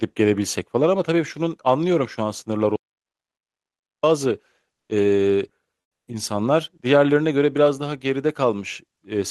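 From 2.76 to 4.03 s the speech cuts out into an audio dropout to silence lasting 1.27 s. The gap holds silence with no room tone, likely because the input was lost while recording continued, which sets it apart from a fade or a noise gate.

From 4.75 to 4.89 s, for 140 ms, the real background is replaced by comfort noise: steady, featureless hiss about 8 dB quieter than the surrounding room sound, which sits about 59 dB below the loudest speech. It is likely discontinuous transmission of the kind Opus DTX performs. Unlike the earlier silence, noise continues through the gap.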